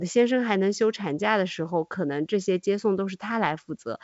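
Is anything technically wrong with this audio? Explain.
No, nothing is technically wrong.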